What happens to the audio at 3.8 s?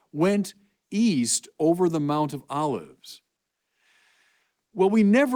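Nothing goes wrong at 3.8 s; the speech carries on intact through that moment, with no dropout, click or distortion.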